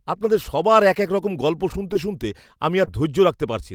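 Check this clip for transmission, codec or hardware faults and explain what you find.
Two brief glitches break up the speech, both short concealed packet loss. At 1.93 to 1.97 s, just after "এক রকম গল্প শুনতে", and at 2.85 to 2.89 s, after "রকম গল্প শুনতে শুনতে", there is a quick smear or wobble. About 20 ms of audio never arrived, and the receiver patched each gap by extending the preceding sound before blending back.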